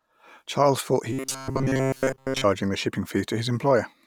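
Speech, where new audio likely arrived too seldom between 1.13 and 2.45 s, after "thought he": repeating 7.5 ms buffers produce robotic sound from repeated short buffers, a metallic 133 Hz buzz until "the shipping".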